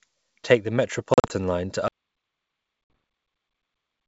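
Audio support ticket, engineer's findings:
Packet loss on ADPCM call, 1.14–1.33 s: speech chopped by short hard-edged holes, returning with slight grit. About 100 ms lost across 160 ms, longest run 40 ms, roughly five packets. Decoder predictor and step size desynced after each gap, then re-converging within tens of ms.

Second ADPCM packet loss, 2.84–2.90 s, 60 ms, roughly three packets. Falls inside the dead stretch below, so no recovery click or level jump is audible.

Audio dropout to silence, 1.88 s to end: speech cuts off mid-flow into silence, no room tone, nothing recovers. Likely cause is input loss upstream, such as a disconnected device, failed link or mute, with silence written afterwards. G.722 at 64 kbit/s carries the earlier audio clean.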